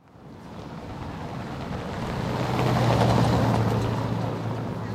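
No technical faults are audible.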